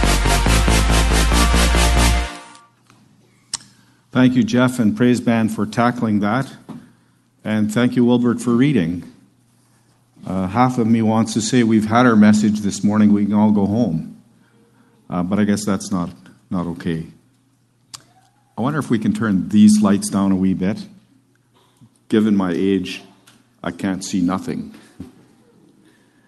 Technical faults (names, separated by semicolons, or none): none